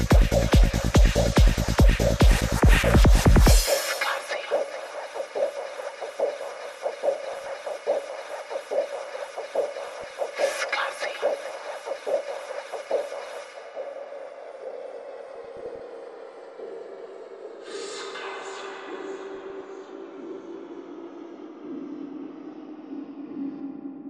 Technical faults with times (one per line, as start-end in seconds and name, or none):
0.00-24.09 MP2 compression
2.69-2.91 DAB burbling
7.18-7.49 DAB burbling
9.83-10.13 DAB burbling
15.29-15.80 DAB burbling
19.35-19.61 DAB burbling